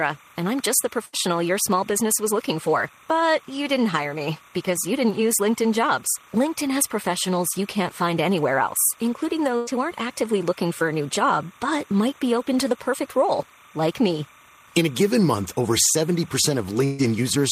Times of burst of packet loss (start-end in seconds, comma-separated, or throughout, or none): 1.05-1.15, 9.57-9.69, 16.85-17.01